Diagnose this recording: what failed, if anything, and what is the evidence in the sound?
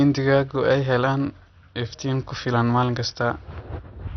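The speech shows MP2 compression damage at the codec stage, throughout. Nothing is heard above about 6.2 kHz, so it sounds dull. Upper sub-bands flicker and gurgle, granular from coarse quantisation. This likely comes from heavy bit starvation, which fits a 48 kbps rate.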